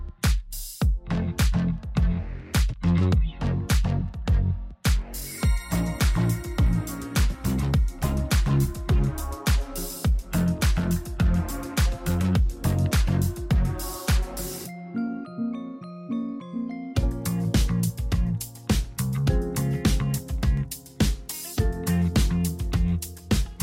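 Dropped samples at 4.08 s and again at 20.57 s: each is a single sharp click, a thin vertical line across the spectrum. The likely cause is a fraction of a millisecond of samples going missing, so the waveform jumps abruptly to a later value without losing any audible sound.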